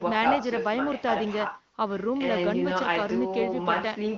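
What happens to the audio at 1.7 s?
Nothing goes wrong at 1.7 s: the speech there comes through intact, carried by the AMR wideband (HD Voice) codec at 23.05 kbit/s, with its usual band limit of about 7.1 kHz.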